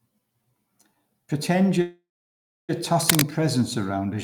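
At 1.81 s the speech halts in a call audio freeze. The last sound carries on as a fading buzz, then about 650 ms of silence, and the speech resumes at 2.71 s exactly where it stopped. The likely cause is late packets draining the jitter buffer. Unlike a dropout, nothing is lost: roughly 0.87 s is inserted and everything after it is delayed.

From 2.99 to 3.22 s, cable scratch noise adds dense, irregular rustling bursts, roughly as loud as the speech itself, over about a quarter-second. This points to changing contact resistance in a worn cable or connector being moved. Unlike steady hiss or isolated clicks, the noise is uneven and bursty, and the speech underneath keeps running without a break.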